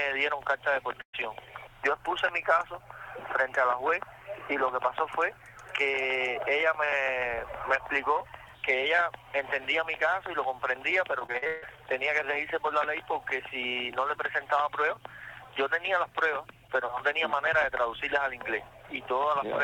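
At 1.01 to 1.15 s, a burst of packet loss cut out about 120 ms of audio. The receiver stretched the last sound to fill the hole and faded it, leaving roughly 90 ms near silence before the audio jumps ahead with that stretch missing.

From 11.19 to 11.77 s, repeated packet loss punches six holes into the stream, the longest 145 ms. Each is patched by extending the preceding sound, so about 55% of the span is concealment, giving a choppy, robotic texture with 260 ms lost.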